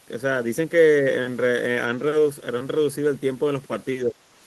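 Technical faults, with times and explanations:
4.04–4.17 s: speech suppressed in double talk. The speech briefly dips by about 10 dB. An echo canceller likely mistook it for loudspeaker echo and turned it down.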